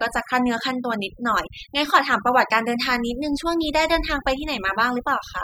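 Across the whole speech clip, the background drops and breaks up into twinkling, chirpy specks. That is overdone noise removal: a noise reducer set too aggressively cuts individual frequency bands whenever they sit near its noise estimate, taking quiet parts of the voice along with the noise.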